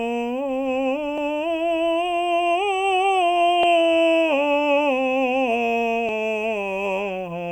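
At 1.18, 3.63 and 6.09 s the music skips forward by about 40 ms, the spacing matching 2.5 s chunks, so this is likely audio missing between chunks, lost at each handover. Unlike a dropout, no silent gap appears: the two sides butt straight together.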